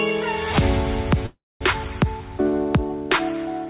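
A call audio freeze runs from 1.26 to 1.63 s. The last sound is stretched into a fading buzz or hiss, then about 230 ms of silence. The audio then resumes where it stopped, 345 ms late, with nothing lost. The likely cause is delayed packets draining the jitter buffer. Throughout, nothing sounds above 4 kHz, which fits a G.711 mu-law call codec.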